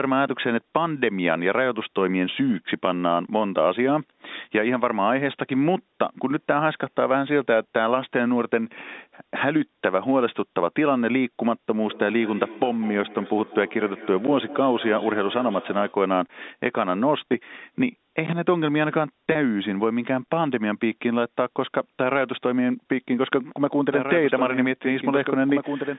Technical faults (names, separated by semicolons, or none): feedback echo between two devices; packet loss with pitch repetition; doubled audio track